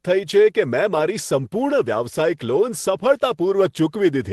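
No technical faults are audible.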